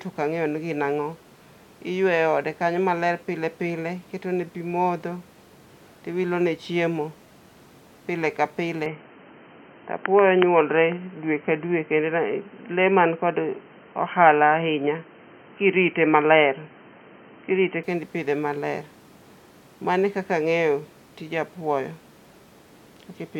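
From 8.86 s, just after "pile ka", the speech turns dull and boxy, with nothing above 3.1 kHz, a level shift of about 5 dB and faint new background noise, until 17.84 s before "kendo ipidhe maler". This is likely an input switched to a poorer device, changing instantly without a gap.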